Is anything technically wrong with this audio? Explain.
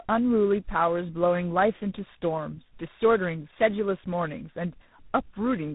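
Yes. Tandem speech coding runs through the whole clip: the speech was decoded and re-encoded at each link, with a GSM-style low-rate coder feeding a G.726-type ADPCM stage. The second coder compounds the first's errors, leaving rough, muffled, warbly speech with nothing above 3.8 kHz.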